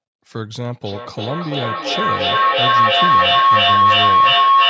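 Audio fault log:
0.83 s to the end, feedback howl: two devices in the same room on this call are feeding each other, so the sound loops from a loudspeaker into a microphone with more gain each pass. Instead of dying away, the repeats pile up and narrow to a ringing tone near 1 kHz, with a loop delay of roughly 300 ms. It peaks at about 13 dB above the speech and never gets broken, running until the clip ends.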